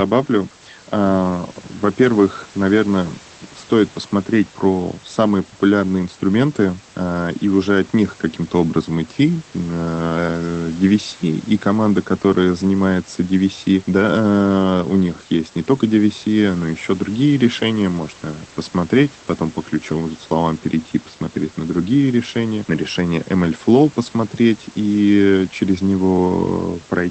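A recording of speech with nothing technically wrong in it. It has come through a call path whose codec limits the sound to about 8 kHz, which fits a low-bitrate Opus setting, and the room's background noise sits about 26 dB below the speech.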